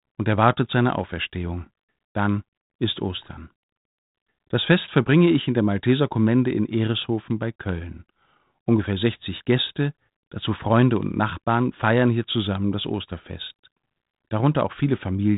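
No technical faults can be heard; the speech is band-limited to about 3.8 kHz with only the light graininess of adaptive differential coding, which fits a G.726 telephone path at 32 kbit/s working as designed.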